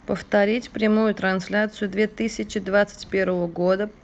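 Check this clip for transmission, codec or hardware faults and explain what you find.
Two linked timing faults, both from a sender clock running slightly slow.

Clock drift between sender and receiver, throughout: the sender's clock runs roughly 3% slower, so the jitter buffer keeps draining and the receiver must stretch the speech to fill gaps.

Repeated timing corrections, 0.18 to 4.0 s: the receiver repeatedly inserts short repeated pieces, playing at about 97% speed and adding around a tenth of a second. It sounds like faint hiccups and a slightly dragging, uneven pace. The audio also carries the band limit of the Opus call path, with content cut off above 8 kHz.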